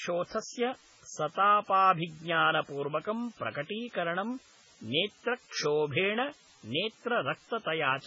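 From start to end, a constant, even hiss sits under the speech. This is low bit depth with dither. The signal is held to very few levels, which fits 8-bit samples. Dither turns the rounding error into steady white noise, about 25 dB below the speech.

Also throughout, the speech sounds watery and swirly. Nothing is heard above 7.6 kHz. S sounds turn metallic and chirpy, and attacks smear. The likely cause is heavy MP3 compression at a very low bitrate, which fits 16 kbps.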